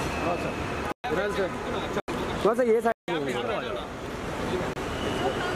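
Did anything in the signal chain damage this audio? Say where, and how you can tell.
Yes. The damage is in the driver or buffer stage. There are four blocks of digital silence: 0.92 to 1.04 s (120 ms), 2.00 to 2.08 s (80 ms), 2.92 to 3.08 s (160 ms), and 4.73 to 4.76 s (about 26 ms). Each one is an abrupt dropout to silence with no fade. That points to output buffers not being filled in time, so the gaps were written as zeros.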